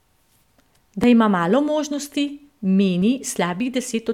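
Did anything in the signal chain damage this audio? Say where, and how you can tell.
Yes. At 1.04 s and again at 3.02 s the speech jumps forward, losing a short slice of sound (roughly 30 ms, then roughly 20 ms) with no silent gap in between. This likely points to a dropped buffer (overrun) at the driver or buffer stage, where samples were overwritten before being read and the two sides were joined directly. A network or codec dropout would leave a gap or a smeared patch, not a clean skip.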